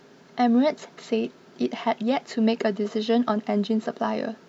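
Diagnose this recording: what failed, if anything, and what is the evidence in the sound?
Nothing failed in this recording, and the sound gives no evidence of any fault.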